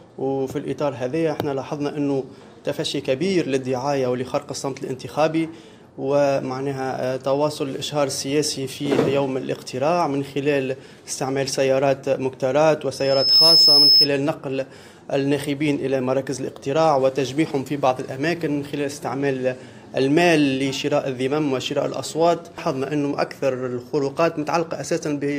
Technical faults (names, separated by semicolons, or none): loudspeaker feedback squeal